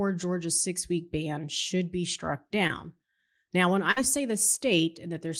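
A speech recording with two network dropouts. Short concealed packet loss at 2.67 to 2.71 s: about 20 ms was synthesised from the preceding sound, showing as a brief smeared patch. A burst of packet loss at 3.91 to 3.99 s: 40 ms went missing and a 50 ms fading continuation fills it, visible as smoothly decaying waveform and blurred spectral bands.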